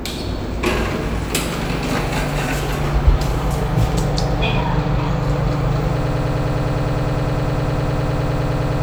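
A recording of sounds that falls into a broken-record loop at 6.02 s: a fragment of about 0.10 s repeats exactly, back to back, about 27 times until the clip ends. The likely cause is a player, encoder or stream that stalled and kept resending the last piece it held. Unlike an echo or reverb tail, each repeat is identical and does not decay, and the sound that should follow is simply missing.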